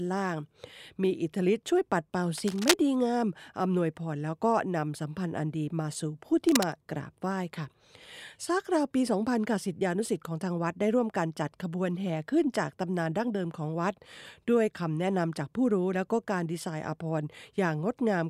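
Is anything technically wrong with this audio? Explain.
Yes. The speech has cable scratch noise twice, from 2.38 to 2.75 s at about the level of the speech, and from 6.48 to 6.72 s somewhat quieter. Each is a dense, uneven rustling scratch over the sound. The likely cause is a worn cable or connector being moved, its contact resistance jumping rapidly. On a waveform these appear as ragged, spiky bursts; a spectrogram shows irregular broadband smears across the frequency range.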